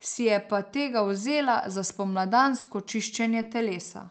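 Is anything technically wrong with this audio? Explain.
Yes. The speech has two kinds of fault, both from packet problems on a call link. The link itself carries sound only up to about 8 kHz, which fits a wideband Opus setting.

Burst of packet loss, 2.59 to 2.69 s. Several packets in a row failed to arrive in time. The receiver covered the hole by extending the last sound for about 80 ms and fading it down. You hear a short held buzz or hiss that dies away. Playback then resumes later, and roughly 80 ms of speech is simply gone.

Lost packet rebuilt from error correction, at 2.91 s, 3.29 s and 3.42 s. Each time a single 20 ms packet went missing. The following packet carried a low-bitrate backup copy, and the decoder played that instead. So nothing drops out. Each spot sounds briefly rougher and noisier than the surrounding speech. It is a tiny grainy blip rather than a gap.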